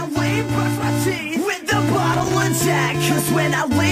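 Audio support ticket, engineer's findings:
Loose connector crackle, 2.13 to 2.43 s: irregular burst of scratchy crackle lasting 0.3 s. Probable component: worn or dirty plug or jack contact. Mechanism: contact making and breaking as the connector shifts, chopping the signal on and off. Distinguishing point: the spacing is erratic and the burst is confined to one short stretch, unlike clock clicks, which repeat at a steady interval.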